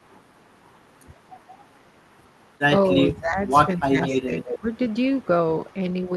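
A speech recording in which the talker's voice is pulled down during 3.15–3.4 s, 3.78–3.96 s, 4.12–4.32 s and 4.6–4.66 s, by as much as about 20–25 dB. This is speech suppressed in double talk, likely an echo canceller ducking its own talker along with the loudspeaker echo. Unlike packet-loss dropouts, these are level dips rather than clicks. An echo leak follows at 4.02–4.16 s and 4.4–5.27 s: a distinct copy of the voice trailing 194 ms behind at about 10 dB down. Much fainter traces recur at 5.67 s and 5.92 s. Its fixed, discrete delay separates it from room reverb.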